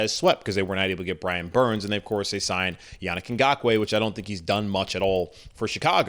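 Resampler restarted on every block, throughout: each 40 ms block is converted alone, so its edges carry errors, heard as a 25 Hz buzz only during speech.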